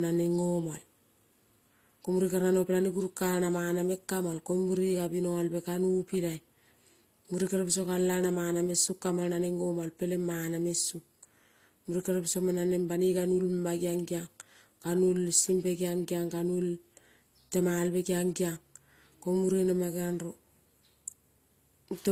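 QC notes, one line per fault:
Throughout, transcoding between lossy codecs: the speech carries two layers of artefacts at once, the smeared, swirly high end typical of a low-rate HE-AAC encode and the artefacts Opus adds on top, which fits something like 24 kbit/s AAC re-encoded to Opus around 48 kbit/s. That's likely a chain of encodes. The second codec is wasting bits reproducing the first one's damage, and nothing survives above 15.6 kHz.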